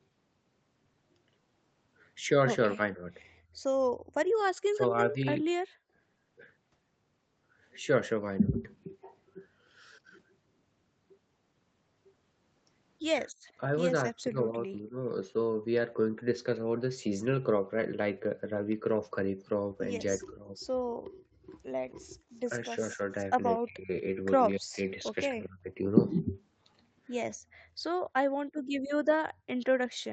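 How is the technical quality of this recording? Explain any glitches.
The recording has several call-processing glitches clustered around both sides talking at once. The top end stops near 8 kHz throughout, which is just what the call path passes.

Speech suppressed in double talk shows up three times: 2.75 to 5.15 s, 13.43 to 14.97 s, and 20.18 to 25.7 s. The voice dips in pieces, only a few dB in the first stretch, around 20 dB in the second, and as much as 30 dB in the third. The dropouts add up to roughly a third of a second, half a second, and a second and a half. The likely cause is the echo canceller failing to separate the near talker from the loudspeaker echo while the far side talks, so it turns both down.

Background gated by the echo canceller happens at 3.41 to 5.97 s, 20.88 to 22.27 s, and from 27.36 s to the end. The room sound underneath gets pushed down hard while the loudspeaker plays: by about 40 dB in the first case, about 31 dB in the second and about 33 dB in the last. 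The first two add up to roughly 0.7 s of gaps each, with the ambience popping back once the canceller lets go. The last one runs straight out to the end of the clip.

An echo leak appears from 21.9 to 23.45 s. It's a faint delayed copy of the voice trailing about 0.24 s behind, sitting roughly 30 dB under the speech. The likely cause is a loudspeaker on one end whose echo canceller didn't scrub everything its microphone picked up, so the leftover got sent back down the line. It lands right inside the heavy double-talk stretch.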